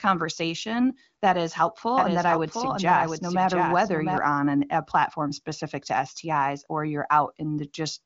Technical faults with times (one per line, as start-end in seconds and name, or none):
1.98-4.18 doubled audio track